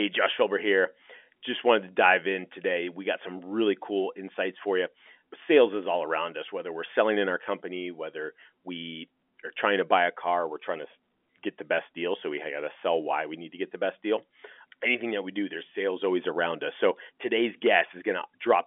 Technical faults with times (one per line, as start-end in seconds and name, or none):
none